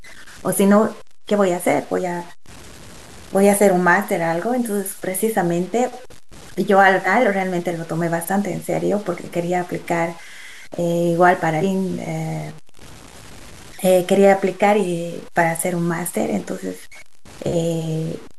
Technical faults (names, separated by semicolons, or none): low bit depth without dither; compressed frames skipped